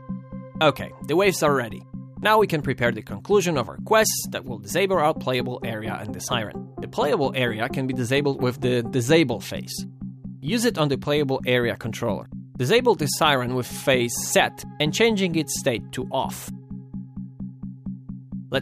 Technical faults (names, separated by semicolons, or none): none